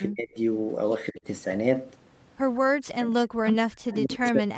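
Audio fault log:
0.08–0.37 s, 1.11–1.24 s, 2.67–3.20 s and 3.42 s to the end: speech suppressed in double talk. The echo canceller likely mistook the talker for loudspeaker echo while the far side was speaking and attenuated both, so the speech sinks sharply in these stretches. It drops by roughly 30 dB in the first, about 20 dB in the second and as much as about 40 dB in the last two.
3.47–3.53 s and 3.91–3.96 s: echo leak. The loudspeaker side's canceller likely failed to remove all of its microphone pickup, and the remainder was sent back. Two brief scraps of a delayed copy, lagging about 186 ms behind the original, surface inside the suppressed final stretch. The first sits about 20 dB below the speech and the second about 30 dB below. Both are faint and short.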